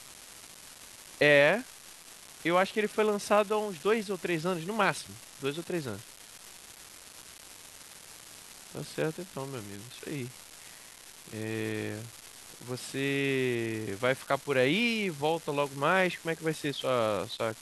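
Speech runs with an unreliable data bit from start to finish: one marginal data line flips at random, adding identical spikes of about -28 dBFS that make a steady fizzy crackle. Unlike clipping distortion, the crackle keeps going through pauses and doesn't grow with loudness.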